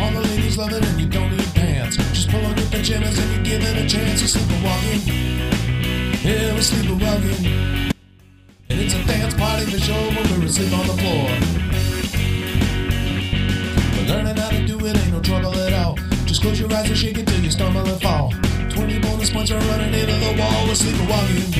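An audio dropout to a faint residue runs from 7.92 to 8.70 s: the sound cuts abruptly for about 0.78 s, leaving only a faint leak roughly 30 dB below normal level, likely because the signal feed broke while the downstream path stayed live.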